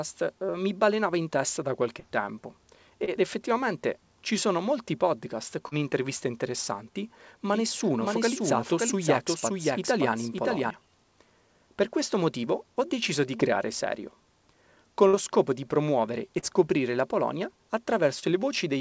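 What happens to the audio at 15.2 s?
Right around there you're hearing a burst of packet loss, running from about 15.07 to 15.16 s, just before "scopo di promuovere e". A short run of audio never made it through the call, so the receiver stretched the last bit of sound it had, roughly 57 ms of it, turning it down as the gap went on. Then the speech picks up again with about 60 ms simply gone. The concealed stretch still sits within the G.722 band, with nothing above 8 kHz.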